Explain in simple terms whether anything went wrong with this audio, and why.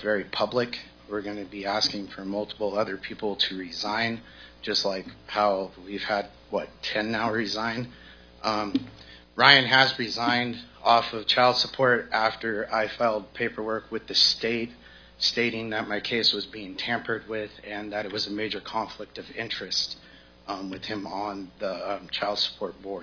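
Nothing went wrong here: no technical faults can be heard anywhere in this recording.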